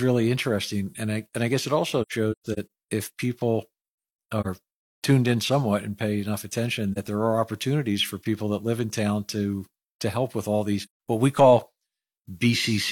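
Soft-edged dropouts break the speech from 2.02 to 2.69 s (several gaps, the longest about 150 ms), then 4.41 to 4.47 s, 6.92 to 6.98 s and 10.82 to 10.93 s. This is AAC frame loss with muting: missing frames were decoded as silence, and overlapping windows faded the sound out and in around each gap.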